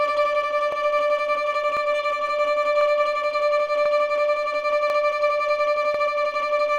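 Overlapping chunks cause a stutter at 0.72, 1.77, 2.81, 3.86, 4.90 and 5.94 s. Each 1-second chunk starts 44 ms before the last one ends, so 44 ms plays twice at every join. A click-like repeat recurs about every 1.04 s.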